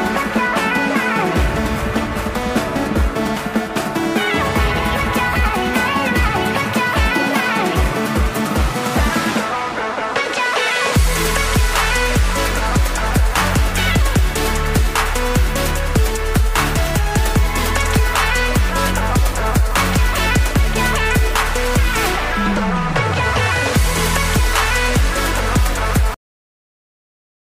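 No technical faults are audible at any point in the recording.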